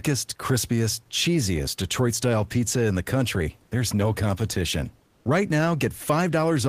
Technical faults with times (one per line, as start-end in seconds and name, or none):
5.07-5.25 comfort noise in place of the background